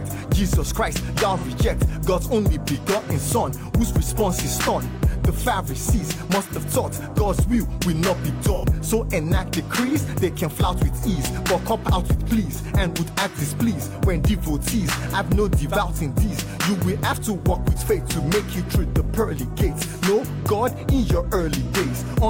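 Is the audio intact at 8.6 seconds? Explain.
No: AAC frame loss with concealment at 8.54–8.65 s, about 85 ms, consistent with two lost frames. The decoder refills the gap from the last good spectrum, leaving a smeared, phasey patch.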